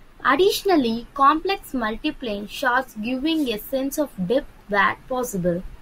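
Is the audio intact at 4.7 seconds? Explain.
Yes, at 4.7 s there is no audible fault, so the audio plays through intact at that point.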